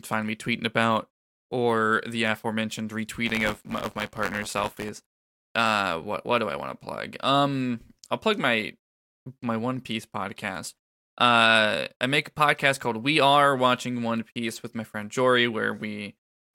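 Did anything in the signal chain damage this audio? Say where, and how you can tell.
Yes. Just after "about or the aforementioned", from 3.25 to 4.89 s, the speech carries a robotic rattle at 93.8 Hz. That is buffer tearing at the driver or buffer stage. Writer and hardware reader slipped, so a small slice of each period replays audio about a lap old. The rate fits a 512-sample buffer.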